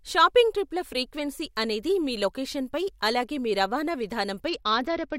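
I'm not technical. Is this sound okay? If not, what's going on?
No. From about 4.48 s, right after "లొకేషన్పై అలాగే మీ రవాణా", the speech turns dull and gritty until the end. That's a Bluetooth SBC bit pool drop: the connection got crowded, so the phone squeezed the sound into far fewer bits, losing the crisp highs.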